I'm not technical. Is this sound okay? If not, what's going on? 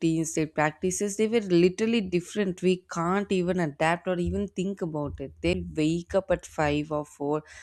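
No. There is one fault, at about 5.53 seconds. It is a CD skip. The disc player briefly lost its place on the disc, probably from a small knock or a flaw on the surface. The laser that reads the disc jumped to a neighbouring part of the track. You hear a tiny tick, with a silence of about a hundredth of a second. Then the speech carries on from a slightly different point, so a small piece is out of place.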